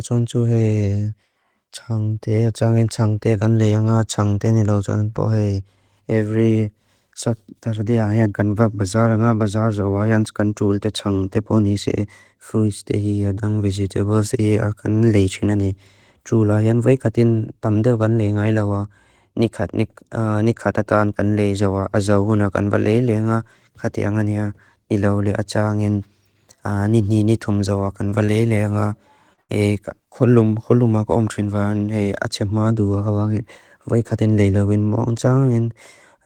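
Around 28.09 to 28.13 s and again at 28.25 to 28.29 s the speech briefly smears, a short wobble where the sound seems held for an instant before blending back; a third, longer smear follows at 29.33 to 29.39 s. This is short concealed packet loss: about 20 ms of audio, then about 40 ms, never arrived in time, and the receiver patched each hole by extending the preceding sound before blending back into the real signal.

Immediately after, from 29.41 to 29.51 s, the speech stalls into a held, fading sound and then jumps ahead, with a stretch of the utterance simply gone. This is a burst of packet loss: roughly 80 ms went missing in one run, and the receiver carried the last sound forward for about 74 ms, turning it down as the gap continued, so what was lost is replaced by a decaying imitation rather than the real audio.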